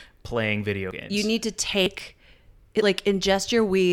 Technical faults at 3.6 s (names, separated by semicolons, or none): none